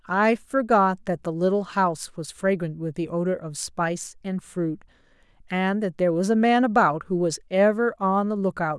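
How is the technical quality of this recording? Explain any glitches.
No technical glitches can be heard anywhere in this speech recording. There is nothing in it that calls for an explanation.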